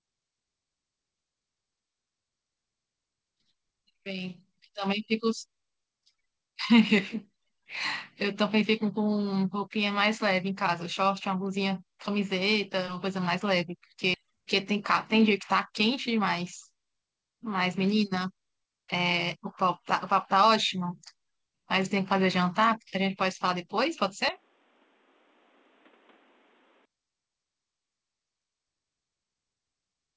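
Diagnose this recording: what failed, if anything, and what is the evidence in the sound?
Skip ahead, at the network or jitter-buffer stage. At 14.14 to 14.16 s the speech jumps forward with no gap and nothing filled in. Roughly 0.4 s is missing. A stretch of audio was dropped while later audio was already waiting, and the two sides were spliced almost directly.

Jitter buffer speed-up, in call processing. Right after the skip, from 14.24 to 15.30 s and from 15.70 to 16.93 s, the speech runs fast at unchanged pitch, about 4% and 5% quicker. Short pitch-period slices were trimmed repeatedly, about 50 and 70 ms in total, to drain excess buffered delay.

Input switched to a poorer device, at the capture stage. From 24.29 to 26.85 s the speech turns dull and boxy, with nothing above 4 kHz, where the G.722 call path elsewhere reaches 8 kHz. The level drops about 10 dB, and new noise sits about 30 dB below it. 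There is no silence at the change. A likely mid-call switch to a narrowband input explains this.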